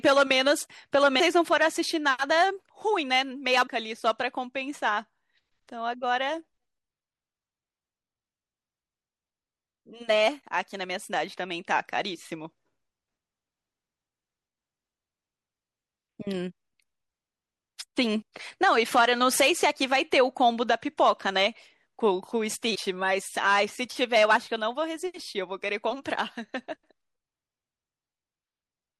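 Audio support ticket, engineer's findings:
Watery, swirly speech with dulled treble and smeared consonant attacks, whole clip. Likely MP3 compression at a low bitrate, around 64 kbps: weak frequency lines dropping in and out between frames.

Compressed frames skipped at 1.19 s, 3.66 s and 22.74 s. Speech jumps ahead about a fifth of a second at the first two and about a tenth at the third, each join a brief smeared blip. Fits lost or rejected decoder frames of roughly 24 ms.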